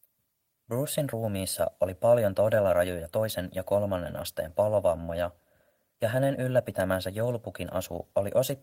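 Clock drift between sender and receiver runs through the whole recording: the sending side's clock ticks roughly 4 percent faster than the receiving side's. More audio arrives than the receiver plays out in the same time, so its jitter buffer steadily overfills. Left alone, this would build up growing delay, so the receiver has to keep discarding small slices of sound.

Repeated timing corrections run from 0.27 s to 8.27 s, where the receiver keeps trimming short pieces to hold the 104 percent incoming rate in step with its own playback. Every edit removes material rather than adding it, but they land at irregular spacing, not on a fixed beat. Each cut is tiny, so they come through, if at all, as small hiccups or a tempo that feels slightly unsteady.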